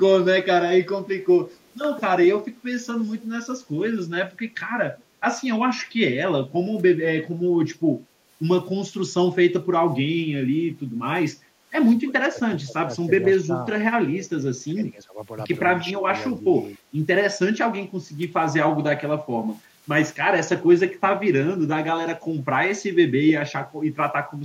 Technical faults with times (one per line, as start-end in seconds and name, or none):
1.20-5.04 echo leak
4.82-5.29 speech suppressed in double talk
7.76-16.81 speech suppressed in double talk
18.76-19.83 speech suppressed in double talk
23.69-24.44 speech suppressed in double talk